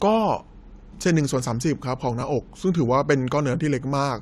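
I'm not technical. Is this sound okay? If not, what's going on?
No. Around 2.21 s there is a Bluetooth stutter: the wireless link briefly dropped what sounds like a single packet, so the receiver replayed its last tiny slice of audio. You hear a quick hiccup of about 15 ms in the speech, after which it carries on.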